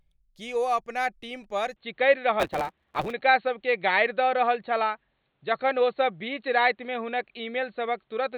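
Speech that turns dull and boxy from 1.76 s to the end, with a level shift of roughly 5 dB, faint new background noise and no gap, likely an input switched to a poorer device. Between 2.39 and 3.13 s a 138 Hz buzz appears and the speech runs 1.6 times fast. That is a truncated block size mismatch, with the tail of each block dropped, which fits 512-sample blocks being written into a shorter read.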